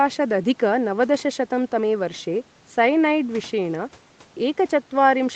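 No technical faults can be heard in this speech recording. It has the sound of a call path, with nothing above 8 kHz and the coding texture of a call codec.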